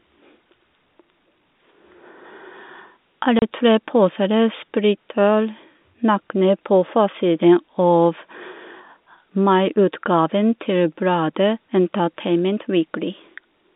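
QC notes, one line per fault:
3.39 to 3.42 s, packet loss filled with silence: a single 30 ms hole drops out of the speech with hard edges at both ends. One lost packet, and the receiver just played silence in its place, no concealment.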